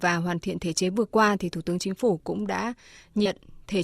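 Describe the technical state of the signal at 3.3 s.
Right around 3.25 to 3.27 s there are compressed frames skipped, so the speech jumps ahead about 150 ms, roughly seven 20 ms frames.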